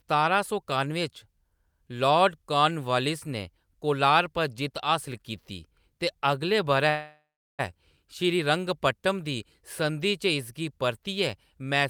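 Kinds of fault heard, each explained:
Call audio freeze: From 6.89 to 7.61 s the speech halts, the last sound trails on as a fading buzz, and about 360 ms of that stretch is near silence. The speech then resumes with "श्रीरंगपट्टम दी", exactly where it broke off, so nothing is lost and everything after is delayed by about 0.69 s. That distinguishes it from packet loss, where material would be skipped. The likely cause is delayed packets draining the jitter buffer.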